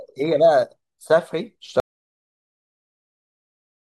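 At 1.8 s the speech cuts off mid-flow and the rest of the clip is dead digital silence, with no room tone at all. This is an audio dropout to silence, likely from the input being lost while the recorder kept writing zeros.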